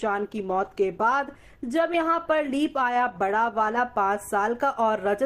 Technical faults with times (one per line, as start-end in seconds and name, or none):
0.00-3.76 adaptive stream starting at a low bitrate